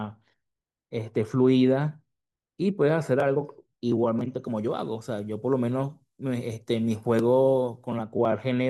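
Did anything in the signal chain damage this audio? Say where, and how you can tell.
Yes. From 4.44 to 8.03 s the speech turns thin, bright and sibilant. This is pre-emphasis left on: treble boosted for transmission was never de-emphasised at playback, leaving about 13 dB extra at 10 kHz relative to 1 kHz, consistent with a 75 µs FM curve. A spectrogram shows the upper bands suddenly brighter across that span.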